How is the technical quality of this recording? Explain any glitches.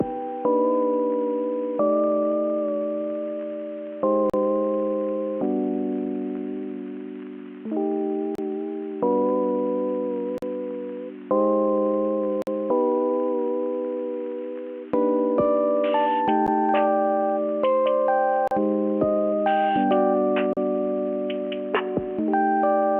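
The recording has repeated dropouts from a gap between stream segments at 4.30, 8.35, 10.38, 12.42, 16.47, 18.48 and 20.53 s. Segment timestamps on a 2-second grid leave small holes that the player fills with silence, so the sound stops abruptly for 13 to 50 ms, with nothing missing.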